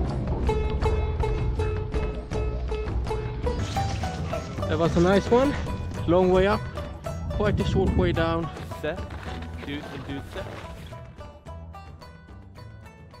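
From the start to 3.59 s, a section at the wrong speed plays at 0.736 times its proper rate, about five semitones low, deep and sluggish, likely from a mismatched clock. A spectrogram shows harmonics lowered and stretched until 3.59 s.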